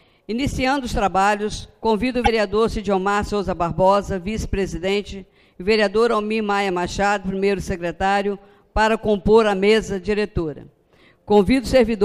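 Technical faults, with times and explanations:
2.24 to 2.28 s, broken MP3 bit reservoir: for about 44 ms the sound is disrupted and then resumes further on than expected. This is likely caused by frames cut from the stream, so the frames that follow look back into the bit reservoir and decode data from the wrong frame. The length fits one to two frames of about 26 ms. A plain dropout would leave only silence, and a click would be a single spike, but here the sound is disrupted and the audio skips ahead.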